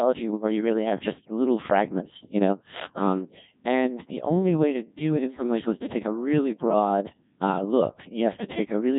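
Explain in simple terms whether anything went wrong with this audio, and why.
Codec 2 vocoder damage runs through the whole clip, from start to finish. Instead of storing the actual sound wave, this low-rate radio codec keeps only a rough outline of the speech: its pitch, loudness and the broad shape of its tone. On playback it rebuilds the voice from simple tones, so the speech comes out heavily robotic and buzzy. Everything above about 3.8 kHz is missing too, which makes the sound dull and boxy.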